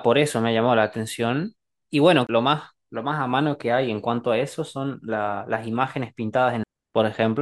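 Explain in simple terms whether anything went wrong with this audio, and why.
A CD skip happens twice, at 2.27 to 2.29 s and at 6.64 s. A knock or disc flaw made the laser jump tracks, so the speech briefly cuts out with a tick and resumes from a different spot.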